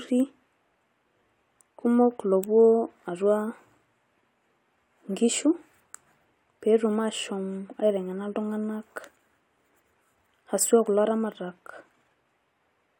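Listening through this short speech recording, nothing stood out as a technical problem.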